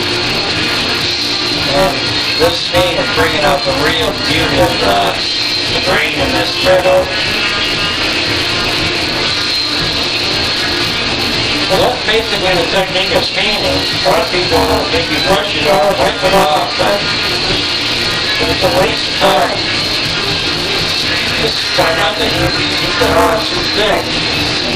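A steady robotic buzz at 200 Hz runs through the whole sound: buffer tearing, where about a third of each roughly 5 ms buffer replays audio from about 20 ms earlier.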